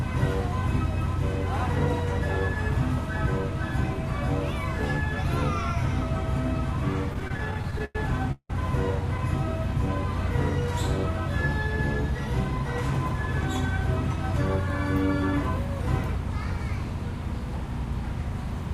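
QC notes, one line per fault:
7.13–7.96 s, repeated stalls (stutter): twelve short gaps over this stretch, the longest 100 ms, together about 241 ms of filled-in sound, roughly 29% of the span. Packets kept arriving late, so the receiver stretched the last sound each time and nothing is lost. On a spectrogram, repeated smeared, held frames between normal segments.
8.32–8.50 s, call audio freeze: the sound stops and a 178 ms gap is inserted, continuing the last sound as a fading buzz or hiss that ends in about 60 ms of silence before the audio resumes where it left off. The likely cause is a delay spike emptying the jitter buffer. On the waveform, a decaying tail then a flat line.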